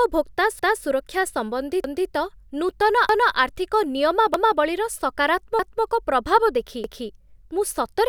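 At 0.59, 1.84, 3.09, 4.34, 5.59 and 6.84 seconds the speech stutters. This is overlapping chunks. The audio was handled in 1-second chunks, and each new chunk began 250 ms before the previous one had finished. So a quarter-second slice plays twice at every join. Each repeat is heard as a brief jump back and a doubled fragment, sometimes with a click. The repeats land every 1.25 seconds, giving a steady, mechanical hiccup.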